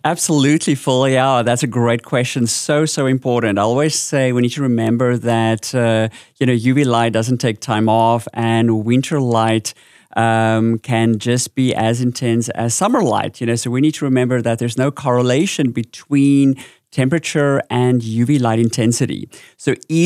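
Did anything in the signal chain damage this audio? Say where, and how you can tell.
No, no signal-chain damage found.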